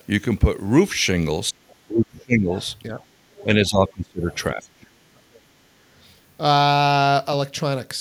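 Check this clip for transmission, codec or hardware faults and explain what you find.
Two faults are present, both tied to echo cancellation during overlapping talk.

Speech suppressed in double talk occurs from 1.51 to 2.55 s, 2.89 to 3.00 s and 3.44 to 5.46 s. The talker's level falls while another voice overlaps. The canceller likely could not tell near speech from loudspeaker echo, so it turned both down. The first and last stretches dip by up to about 30 dB, for roughly 0.7 s and 1.5 s in total. The middle one is a slight dip of about 5 dB.

The other side's voice leaking through appears at 1.69 to 1.75 s, 2.19 to 2.24 s, 2.61 to 2.67 s, 3.32 to 3.45 s and 4.31 to 4.36 s. These are brief, faint scraps of a second voice. The most likely cause is echo from the talker's loudspeaker that the canceller left in the microphone signal. Most scraps sit about 30 to 35 dB below the speech. The one at 3.32 s is the loudest, at about 25 dB down.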